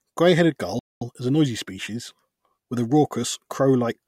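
A speech recording with a playback stall from 0.79 to 1.02 s: the sound halts mid-flow into about 220 ms of flat silence, then resumes with "is a noisy species". The likely cause is the player running short of data or its thread being blocked.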